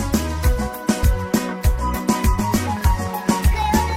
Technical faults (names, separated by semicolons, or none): train of clicks